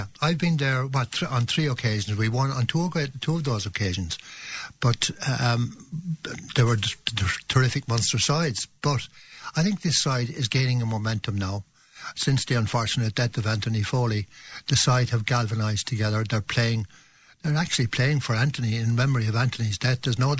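From 12.9 s to 19.0 s, a resampler restarted on every block. Each 100 ms block was converted alone, in a 44.1 kHz to 16 kHz change. Its edges lacked real neighbouring samples. This leaves a steady tick at 10 Hz, riding on the sound.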